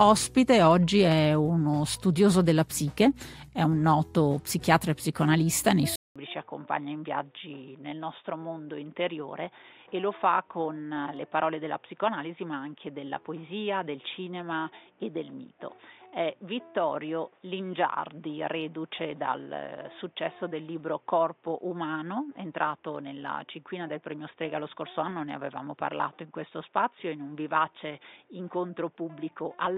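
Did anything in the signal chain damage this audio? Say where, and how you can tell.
Yes. At 5.96 s the capture stage likely switched its input to a poorer device, following a 200 ms silence. From there to the end, nothing above 3.7 kHz remains. The sound turns dull and boxy, about 10 dB quieter, over a new noise floor roughly 40 dB down.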